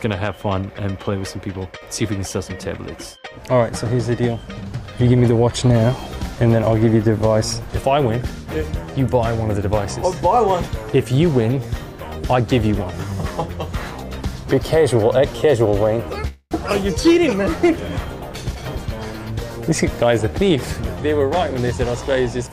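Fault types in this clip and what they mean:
Call audio freeze: From 16.27 to 16.53 s the sound stalls. The last bit of audio is stretched into a fading buzz or hiss that fills about 236 ms and ends in roughly 30 ms of silence. It then resumes exactly where it stopped, so nothing is lost, but everything after arrives 236 ms later. The likely cause is packets held up in transit, leaving the receiver's jitter buffer empty and forcing it to fill the wait.
Jitter buffer speed-up: At 18.33 to 18.87 s, 19.71 to 20.58 s and 21.11 to 22.48 s the audio runs faster at an unchanged pitch. The first stretch runs at 114% speed, the later two at 105% and 104%. The buffer was holding more audio than it wanted, so the receiver repeatedly cut out tiny pitch-period-sized slices. It removed around a tenth of a second in the first stretch, about 50 ms in the second and somewhat under a tenth in the third.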